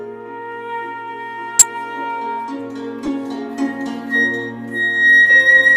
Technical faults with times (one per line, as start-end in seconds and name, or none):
1.59-1.64 corrupt frame decoded
3.05-3.08 corrupt frame decoded